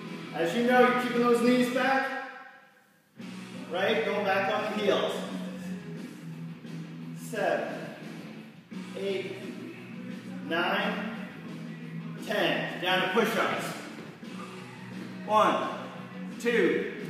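No technical faults can be heard in this audio, so there is nothing to describe in time order.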